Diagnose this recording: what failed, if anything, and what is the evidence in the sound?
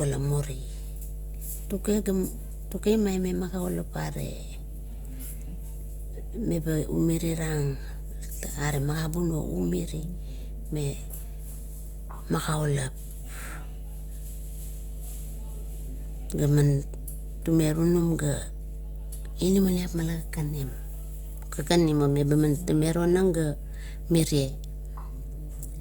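Mains hum entered in the analogue wiring: a steady 50 Hz tone runs under the speech from start to finish, roughly 10 dB below it. A ground loop or nearby transformer is coupling the power line in. Its fixed pitch and constant level set it apart from rumble.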